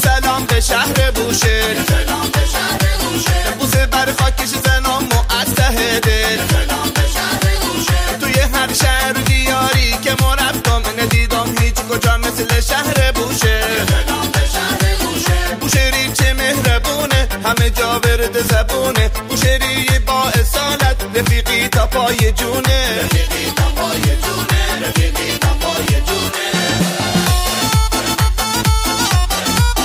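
From 1.08 s to 28.85 s, a tick recurs roughly every one and a half seconds, about twenty in all. These are word clock ticks: the receiver runs on its own clock, off by around 15 ppm, so each slip drops or repeats one sample.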